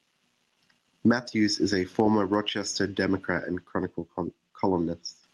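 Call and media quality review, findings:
Gain pumping across the whole clip, with a swing of roughly 15 dB. This is likely input gain set way too hot with a fast limiter clamping peaks, so dynamics get squashed.

Sudden gain jump right after "is a former", 2.49 to 5.24 s: the speech and noise floor drop together by about 10 dB in one step, with no fade, then come back. Likely a digital gain change or bit shift applied without a ramp.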